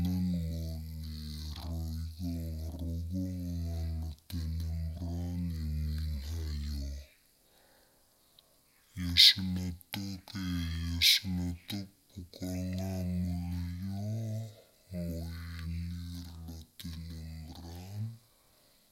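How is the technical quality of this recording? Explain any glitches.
The quality is poor because of one fault across the whole clip, stereo read as mono. The player read the interleaved left and right samples one after another as a single channel, so the speech runs at half speed and sounds an octave lower, slow and deep throughout.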